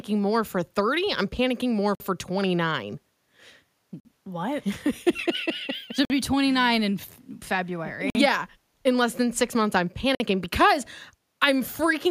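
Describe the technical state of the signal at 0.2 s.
At 0.2 s the signal is intact, with no audible fault at that moment.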